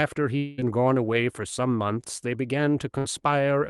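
From 0.37 to 0.61 s the last sound is stretched into a fading buzz or hiss for about 200 ms, then audio resumes with that stretch missing: likely a long network dropout. At 2.98 to 3.06 s a burst of packet loss removes about 60 ms, concealed by a brief held, decaying continuation before playback jumps ahead.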